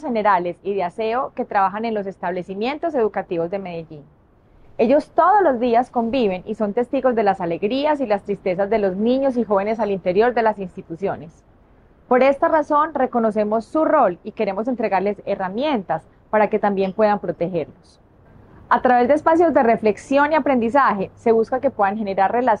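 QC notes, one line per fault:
Nothing stood out on a careful listen, so there is nothing to log for this clip.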